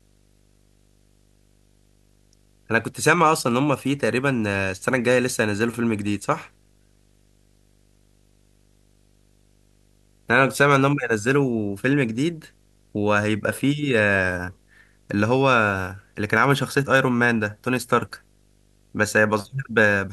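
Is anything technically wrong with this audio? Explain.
Yes. Video or display buzz runs through the whole clip: a screen or video cable is coupling into the audio path, adding a 50 Hz buzz at the picture's field rate with hash above it and a 15.6 kHz line-rate whine, sitting roughly 35 dB beneath the speech.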